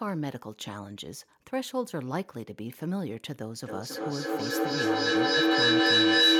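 From 3.62 s to 6.39 s, feedback echo between two devices: one replays the other's microphone, which hears it again, so each word returns roughly every third of a second. Unlike a fading echo, the thinning repeats pile up, to about 10 dB over the speech.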